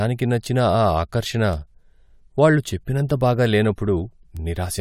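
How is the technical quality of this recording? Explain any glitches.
Two brief glitches in this speech recording are both bit error spikes. At 1.53 s, just after "నచ్చిన ఆ ఆకర్షణ", and again at 4.37 s, a flipped bit in storage or on a digital link pushed a sample or two far off by a power of two. Each is heard as one sharp, broadband tick unrelated to the speech.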